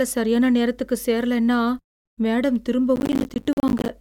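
Processor overload crackle from 2.96 to 3.89 s: buffers of around 10 ms repeatedly miss their deadlines, leaving dozens of hard-edged silent gaps that sound like gritty crackle over the speech.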